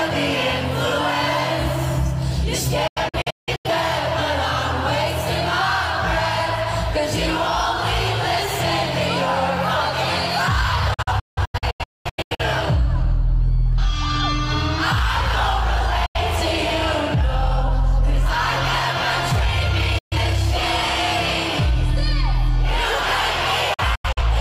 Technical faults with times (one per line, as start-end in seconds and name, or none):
2.87-3.70 digital broadcast dropout
10.94-12.43 digital broadcast dropout
16.06-16.19 digital broadcast dropout
19.98-20.16 digital broadcast dropout
23.74-24.21 digital broadcast dropout